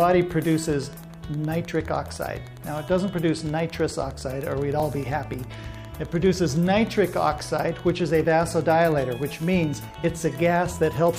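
Wi-Fi interference runs through the whole clip, from start to finish. A nearby Wi-Fi radio is coupling into the audio circuit, and the circuit rectifies its transmissions into the audio band. The beacon repeats every 102.4 ms, so it comes through as a steady ticking just under ten times a second. The ticking sits roughly 30 dB below the sound.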